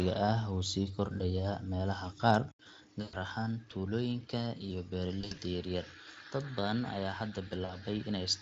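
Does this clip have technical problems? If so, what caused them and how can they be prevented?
Yes. From 2.51 s to the end, the recording likely switched input to a poorer device: after a brief gap of about 80 ms, the sound drops about 5 dB, loses everything above 7.6 kHz and gains a noise floor roughly 35 dB down. Locking the input device for the whole session prevents this.

VoIP packet loss concealed by the speech codec occurs at 3.01–3.16 s, 5.21–5.39 s and 7.65–7.76 s. Lost packets made the decoder extrapolate from its last pitch and filter with falling gain, so 120 ms, then 100 ms scattered over 160 ms, then 40 ms turn into a fading buzzy tone or coloured noise with weak recovery afterwards. A wired connection or a jitter buffer with forward error correction prevents this.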